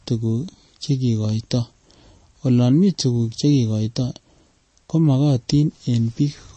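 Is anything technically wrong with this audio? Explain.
Yes. Throughout the speech the audio swirls wetly, with chirpy s sounds and smeared onsets. This is likely MP3 compression starved of bits, fitting about 32 kbps. The encoder chops the treble and lets weak frequency lines flicker between frames. A plain low-pass filter would dull the top without the swirl.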